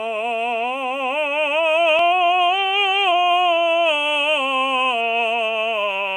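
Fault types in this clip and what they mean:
Dropped buffer (overrun): At 1.99 s the waveform jumps abruptly from one point to a slightly later one, with no gap of silence between them. Only a sliver of roughly a millisecond or two goes missing. The likely cause is a capture buffer that was overwritten before the software read it, so its samples vanished and the neighbouring audio was spliced together.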